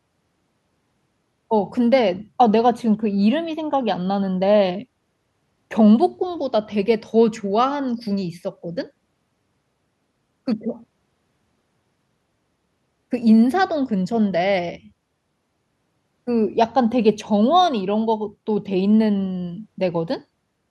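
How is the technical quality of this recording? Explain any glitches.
No glitches can be heard anywhere in the recording. The speech runs on with nothing technical that needs explaining.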